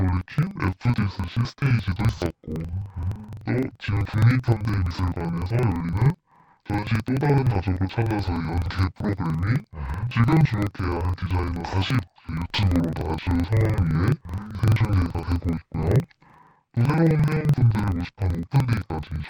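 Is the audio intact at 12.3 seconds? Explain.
No, at 12.3 s the speech is hit by interleaved audio read as planar, which runs throughout: about 43 ms blocks, which fits 2048-sample blocks, get split into halves playing together, so it sounds an octave low, doubled and choppy.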